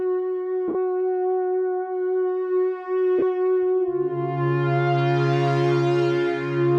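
At 0.68 to 0.75 s and 3.19 to 3.23 s, lost LE Audio frames occur. The LC3 decoder repeats the last spectrum with random signs. The music briefly turns into a noisy smear.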